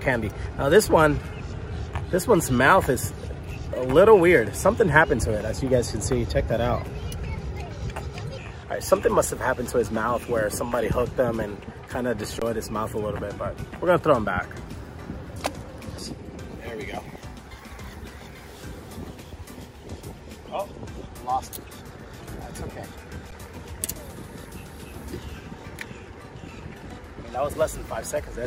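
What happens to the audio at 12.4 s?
The sound freezes flat from 12.40 to 12.42 s, a hold of about 21 ms that starts with little or no click, then resumes with roughly 20 ms of audio skipped. This is an underrun with held sample: the output buffer ran dry and the converter held its last value, a gap that fits a 1024-sample buffer.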